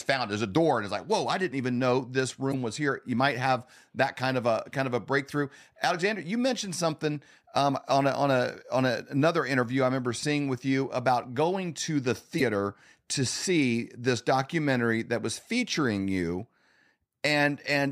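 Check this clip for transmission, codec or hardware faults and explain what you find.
Two short glitches break up the speech, at 2.50 to 2.54 s and again at 12.37 to 12.42 s, each lasting about 44 ms. Both are heard as a sudden blip cutting across the voice. This is damaged data in a compressed stream: bytes in those frames were corrupted or lost, so the decoder misread them, lost sync with the frame structure and briefly produced garbage until it locked onto the next valid frame header.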